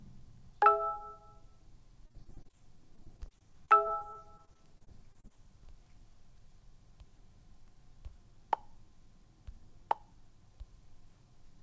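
From 2.06 to 2.55 s there is repeated packet loss, heard as robotic sound. Eight short holes, none longer than 39 ms, are patched by stretching the preceding audio. About 149 ms of this stretch is filler, giving a choppy texture with pieces missing.

From 2.55 to 3.54 s a jitter buffer slow-down follows. The receiver repeats tiny pitch periods to rebuild its reserve, adding 66 ms. Playback drops to 94% speed at unchanged pitch. Sounds feel drawn out.

Overlapping this, from 2.96 to 5.32 s, repeated packet loss returns. Eighteen gaps, each 31 ms or shorter, are filled with continued audio, about 343 ms in total. The choppy quality with pieces missing comes back.

Throughout, the call codec passes nothing above 8 kHz, which fits G.722.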